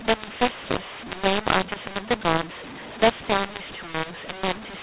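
From start to finish the speech suffers a mu-law and A-law mix-up. It was coded as A-law telephone audio but decoded as mu-law. Levels come out scrambled. The voice sounds harsh and distorted, and the pauses fill with noise within the 4 kHz-limited telephone band.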